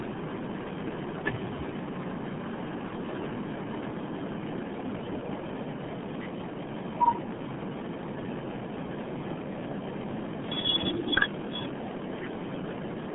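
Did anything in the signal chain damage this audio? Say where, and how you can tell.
Yes, at the codec stage, and it runs the whole clip. It has the heavy RealAudio 14.4 codec signature: the speech is muffled and gargly, confined to roughly 150 Hz to 3.4 kHz with nothing above 3.8 kHz. That squeeze fits a crude 8 kbit/s dial-up speech coder.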